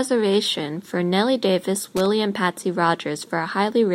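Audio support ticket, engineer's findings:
Loose connector crackle, 1.97–2.06 s, in the speech. Brief irregular burst of scratchy crackle, roughly 90 ms. Probable component: worn or dirty cable contact or jack. Contact intermittently opening under movement chops the signal; any DC on the line adds pops.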